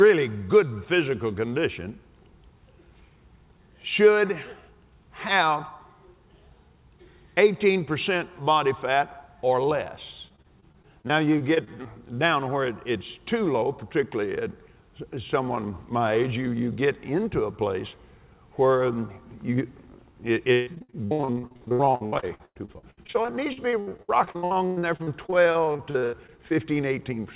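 Repeated packet loss (robotic sound) makes the audio choppy from 10.28 to 11.87 s, with gaps up to 25 ms, and much worse from 20.53 to 26.52 s, where holes reach 142 ms. Each hole was patched by continuing the last sound. On a spectrogram this shows as smeared, repeated slices and abrupt breaks, above a band that stops at 4 kHz.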